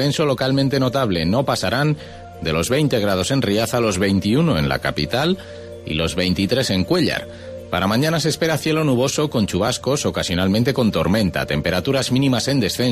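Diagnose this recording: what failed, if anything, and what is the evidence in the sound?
Nothing failed; no fault is audible anywhere.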